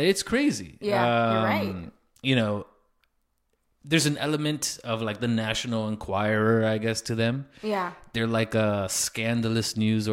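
No technical faults can be heard anywhere in the recording.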